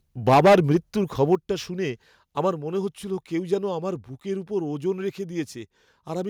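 From 0.28 to 0.77 s the speech shows microphone overload: peaks land about 10 dB past the converter's limit, and a large share of the samples, around one in seven, are cut flat. The loudest syllables take on a harsh, crackling edge. The likely cause is input volume set too high for the converter. On the waveform the peaks are sheared into flat plateaus, and the spectrogram fills with broadband smear above the harmonics.

At 0.34 s, early in that distortion, the microphone volume is stepped down by 2 dB, likely the call software reacting to the clipping. Speech and background drop together in one abrupt step, a slight dip rather than a fade. A second overload runs from 1.22 to 1.35 s, only about 2 dB over, with a small fraction of samples flattened. It gives a brief rasp, and the waveform shows a few clipped tips.

At 1.35 s the volume is stepped down again, this time by 6 dB, right as that distorted peak ends. 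Everything audibly sinks to a quieter level at once. The waveform envelope shows a clean stair-step, roughly halving in amplitude, and the spectrogram darkens evenly across all frequencies from that point on.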